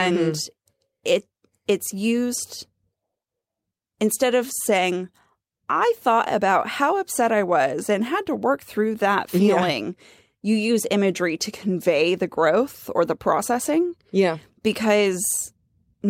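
Nothing in the recording calls for comment, since no technical faults turn up anywhere along its run.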